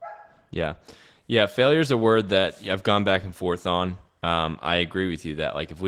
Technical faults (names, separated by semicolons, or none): Opus voice compression